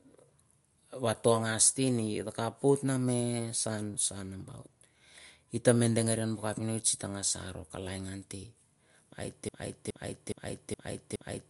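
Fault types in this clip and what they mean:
MP3 compression: throughout, the speech has a plainly audible watery, swirly quality and nothing above about 11.2 kHz, which fits a low-bitrate MP3 around 52 kbps. It is likely lossy encoding starved of bits, cutting the treble and dropping weak frequency components frame by frame.
Broken-record loop: from 9.49 s to the end, a 0.42 s fragment of sound repeats back to back five times, and whatever should have followed is lost. The likely cause is a stalled player or stream that kept resending the last piece it held.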